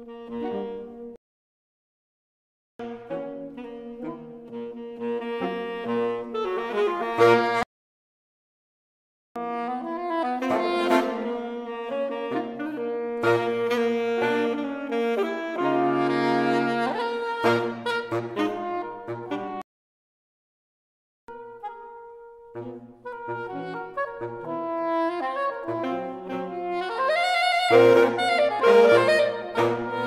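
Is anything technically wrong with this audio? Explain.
Yes. Playback stalls occur at 1.16 to 2.79 s, 7.63 to 9.36 s and 19.62 to 21.28 s, each about 1.6 to 1.7 s long. The output most likely starved of data or had its playback thread blocked, so the sound cuts to silence mid-flow before resuming.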